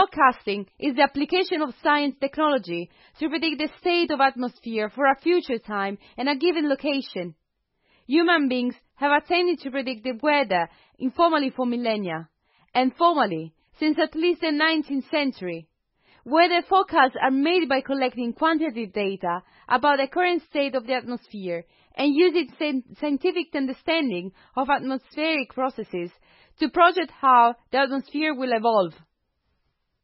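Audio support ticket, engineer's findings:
Watery, swirly speech throughout, with metallic chirps on s sounds and smeared consonant attacks. Nothing above 5.6 kHz, a hard treble ceiling. Probable component: likely MP3 compression, heavy damage, consistent with a very low bitrate near 16 kbps.

Mechanism: bits run short, so the encoder cuts the top band and zeroes weak frequency lines. Those lines switch on and off between frames, producing the swirl and the chirps.

Short hiss just before a sharp attack at 12.74 s, about 12 ms long, with the attack itself softened. Fault: pre-echo, from the same transform codec.

Mechanism: quantisation noise is spread evenly across the block. An attack late in the block pushes noise sized for the loud part into the quiet moment before it.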